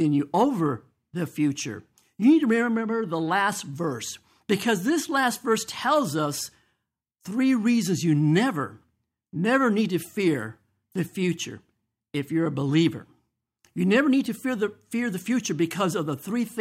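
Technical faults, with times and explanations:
Listening to the speech, nothing stood out as a technical problem at any point.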